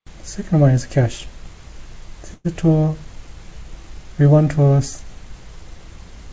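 From 2.34 to 2.46 s the sound smears into a fading fill, likely a call audio freeze. Unlike a dropout, nothing is lost; playback simply resumes 105 ms late.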